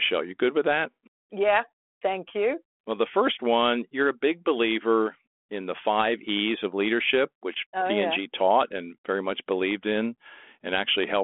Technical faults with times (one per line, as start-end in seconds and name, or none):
none